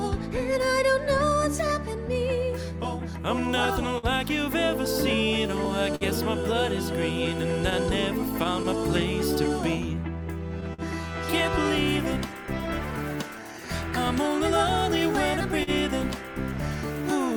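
Slight hiccups and an unsteady pace run through the whole clip, the sign of clock drift between sender and receiver: the sender's clock runs roughly 3% slow. From 0.37 to 10.82 s, about fifteen brief ticks and smears, none longer than roughly 50 ms, are scattered short gaps where late or lost packets were patched by extending the preceding sound. From 0.52 to 17.35 s, the pace sags to about 99% of normal with small repeated stutters. These are repeated timing corrections, as the receiver duplicates short pieces to keep up, adding about 300 ms overall. From 15.08 to 16.98 s, three more short gaps, none longer than roughly 40 ms, bring the same brief smeared ticks.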